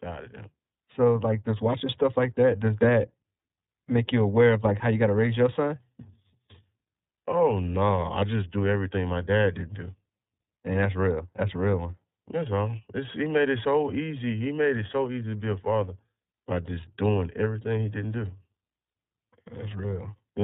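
A speech clip, coded with the iLBC codec from start to finish. Nothing above 4 kHz comes through, so the sound is narrowband and dull. The damage is plainly audible. Speech stays clear but sounds rough and slightly synthetic. Each frame's excitation is coded on its own, without help from the frame before. The texture fits 30 ms frames, which points to the 13.33 kbps mode.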